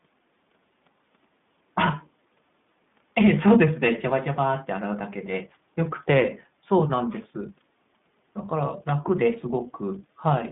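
iLBC codec damage runs through the whole of this speech recording, plainly audible from start to finish. The sound is confined to a narrow telephone band of roughly 150 Hz to 3.6 kHz, so it loses all air and sibilance above that. Because each short block is coded on its own, with a rough, slightly synthetic texture consistent with 20 ms frames at the 15.2 kbps mode, the speech stays intelligible but sounds buzzy and processed.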